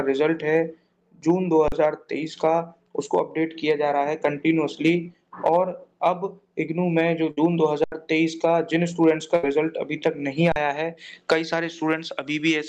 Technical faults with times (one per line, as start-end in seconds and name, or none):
1.68-1.72 underrun with held sample
4.43 short concealed packet loss
7.31-7.38 burst of packet loss
7.84-7.92 underrun with held sample
9.36-9.44 burst of packet loss
10.52-10.56 underrun with held sample